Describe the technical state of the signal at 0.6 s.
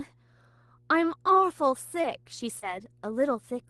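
At 0.6 s a steady 60 Hz mains hum sits roughly 35 dB under the speech, as it does throughout, from power-line coupling via a ground loop or nearby transformer.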